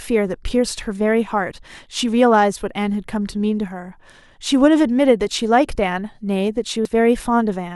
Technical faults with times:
6.85 compressed frames skipped

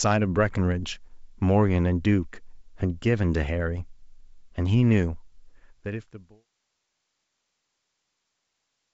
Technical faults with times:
none

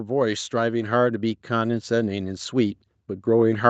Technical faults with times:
0.05-3.70 automatic gain rising

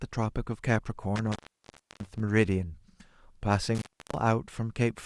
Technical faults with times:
1.16-2.20 intermittent contact
3.75-4.17 intermittent contact

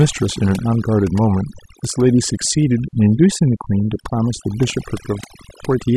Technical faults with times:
0.00-5.96 overdone noise removal

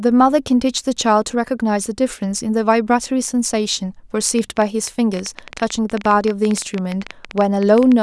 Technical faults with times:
4.39-7.93 train of clicks

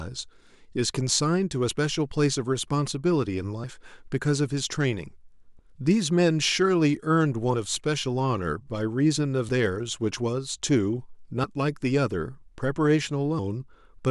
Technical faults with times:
1.69 audio missing between chunks
3.64 audio missing between chunks
5.59 audio missing between chunks
9.49 audio missing between chunks
11.44 audio missing between chunks
13.39 audio missing between chunks

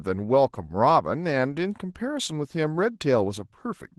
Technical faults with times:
0.00-3.99 Opus voice compression

